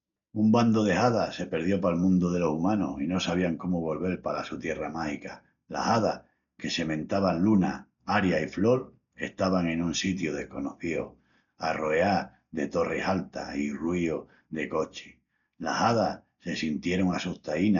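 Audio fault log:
Throughout: Dolby Digital compression. The speech was likely squeezed through an AC-3 style encoder at a very low rate, with heavy damage consistent with around 48 kbps. Starved of bits, the encoder narrowed the band so that nothing survives above 7 kHz, and it left many frequency lines without real detail, which the decoder filled with noise. The voice sounds dull and muffled, with a rough, fluttering grain clinging to its tones.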